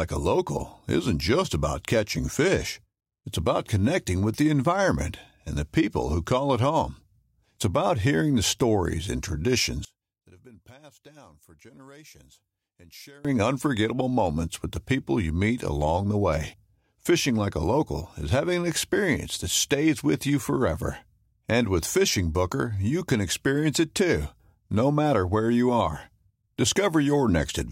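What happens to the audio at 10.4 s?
The speech drops by about 26 dB from 9.85 to 13.25 s, returning before "unforgettable moments with the", likely one channel inverted, so the shared sound cancelled when the channels were summed to mono.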